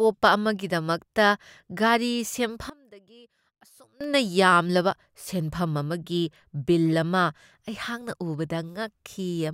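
From 2.70 to 4.01 s, the speech drops by about 23 dB and turns faint. It returns just before "ꯌꯥꯝꯂꯕ ꯁꯦꯟꯐꯝ". The likely cause is one channel inverted. The shared centre cancels when both channels are summed to mono.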